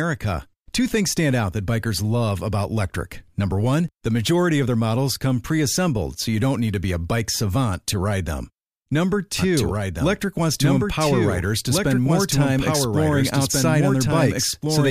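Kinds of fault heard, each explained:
Doubled audio track: The speech is likely being captured a second time through a slower path, or an edit is holding two copies out of step, so the same signal ends up mixed in twice. From about 9.39 s to the end, a full-band duplicate trails the original by roughly one and a half seconds at around 5 dB quieter. It starts abruptly and has no decay or room colouring, so each phrase returns as a flat, dry repeat.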